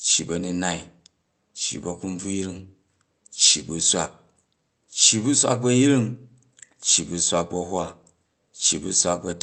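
No technical faults can be heard in this speech.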